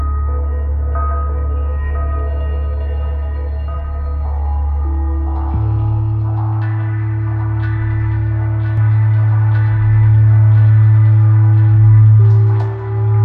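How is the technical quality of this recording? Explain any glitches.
There's one real problem, and it sits in the last stretch. From 8.77 s to the end, the sound becomes a doubled audio track: a second copy of the same audio comes in about two seconds behind the first and at roughly the same loudness. That most likely happened because the signal got captured twice, once through a slower path, or because an edit left two copies stacked out of step. The late copy is full-band and dry, with no decay or room colour. It switches on abruptly at 8.77 s and runs to the end, so everything you hear is followed by a flat, equally loud replay.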